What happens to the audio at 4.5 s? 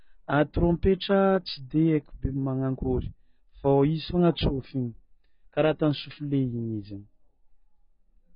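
At 4.5 s the speech is dull and smeared, with nothing above 5 kHz and a warbling, fizzy edge on sibilants, as it is throughout the clip. The likely cause is heavy AAC compression at a very low bitrate, around 16 kbps. The coder drops high frequencies and coarsely quantises the remaining spectrum. A plain low-pass filter would dull the sound without adding that warble.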